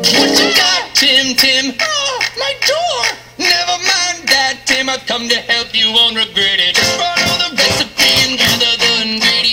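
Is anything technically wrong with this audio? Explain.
Yes. There is integer overflow at 1.39–1.41 s, at 2.68 s, and across 8.01–8.49 s. When loud peaks push a sample past the largest value the integer format can hold, the value wraps around to the opposite extreme instead of being limited at full scale. The waveform jumps across its entire range in one step, producing sharp, violent cracks that are harsher than ordinary clipping.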